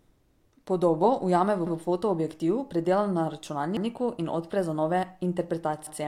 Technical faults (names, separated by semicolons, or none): overlapping chunks